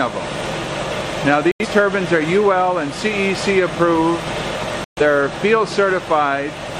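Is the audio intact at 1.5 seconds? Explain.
No. From 1.52 to 1.66 s the sound drops to silence, then resumes further along. This is a digital broadcast dropout: the receiver lost valid frames and muted until good ones returned, and the roughly 85 ms of lost audio fits two lost frames.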